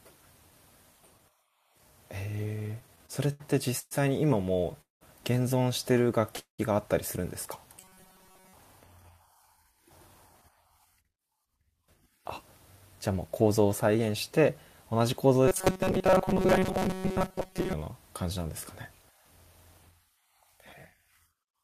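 From 2.59 to 5.03 s the speech drags and stutters through thirteen brief hangs, the longest 196 ms, adding about half a second in all. These are repeated stalls (stutter): packets arrived late, the jitter buffer kept running dry, and the receiver stretched the last sound until audio resumed.

At 6.39 s the sound freezes for 194 ms, a fading held tone that drops to silence for 120 ms before speech continues from where it stopped. This call audio freeze likely comes from packets held up in transit, emptying the jitter buffer and inserting a gap.

From 7.80 to 8.54 s, and again from 15.48 to 17.73 s, the speech turns into a rigid metallic buzz at 188 Hz that still loosely tracks the words. This robotic sound from repeated short buffers points to audio being refilled by looping a roughly 5 ms fragment, which fixes that pitch while most of the real audio is skipped.

From 9.26 to 11.72 s the speech sounds hurried, running at 111% speed with unchanged pitch, losing about a third of a second. 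From 13.09 to 15.00 s a milder rush runs at 106%, losing roughly a sixth of a second. Both are jitter buffer speed-up: with excess audio queued, the receiver trimmed out short pitch-period slices to cut delay.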